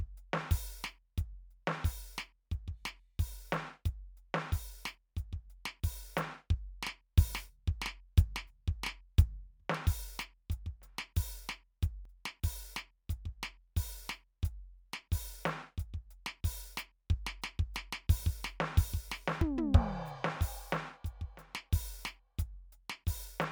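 Recording input was likely not read in time, so the hardware overwrote samples in a dropped buffer (overrun). The music jumps ahead at 12.05 s, losing around 70 ms, and again at 19.41 s, losing around 40 ms.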